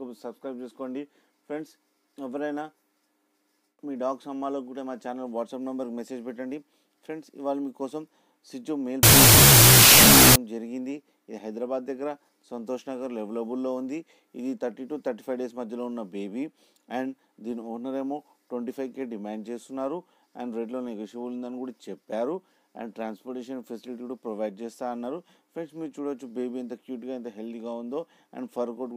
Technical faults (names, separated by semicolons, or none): wrong sample width